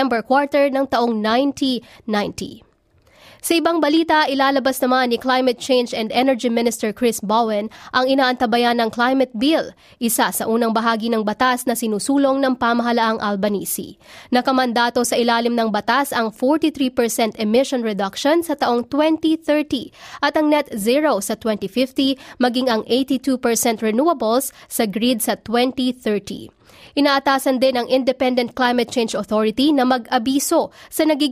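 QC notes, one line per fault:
No faults found. Nothing in the audio calls for a QC note.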